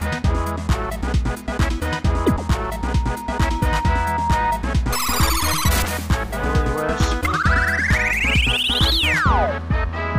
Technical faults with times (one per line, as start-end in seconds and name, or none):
2.14-4.69 loudspeaker feedback squeal